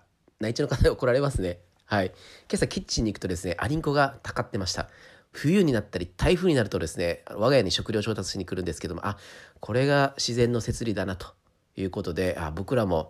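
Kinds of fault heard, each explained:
No kinds of fault are heard in this clip.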